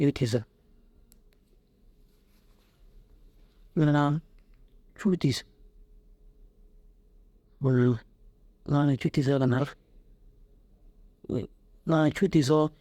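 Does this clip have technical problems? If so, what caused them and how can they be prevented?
No, nothing in this speech clip points to a technical fault, so there is no cause to trace and nothing to prevent.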